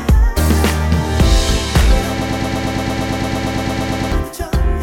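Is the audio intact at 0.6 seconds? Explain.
Yes, the audio is intact at 0.6 seconds, with no dropout, click, distortion or other fault audible at that moment.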